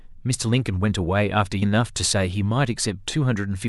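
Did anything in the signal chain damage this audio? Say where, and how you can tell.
Yes: compressed frames skipped at 1.61 s, at the codec or storage stage. The speech jumps forward by around a third of a second, about ten frames of roughly 26 ms each.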